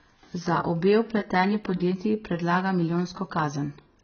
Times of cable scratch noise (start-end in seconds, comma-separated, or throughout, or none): none